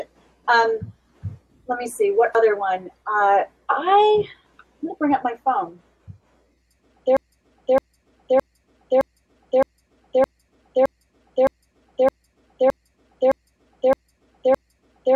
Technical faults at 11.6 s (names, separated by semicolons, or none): broken-record loop